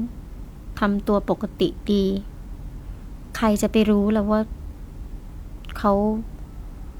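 Nothing technically wrong turns up anywhere in this short speech recording.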